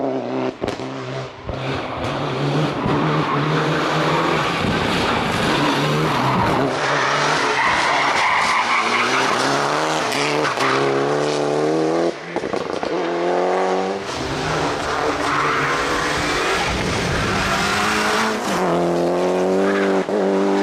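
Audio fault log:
No audible faults detected.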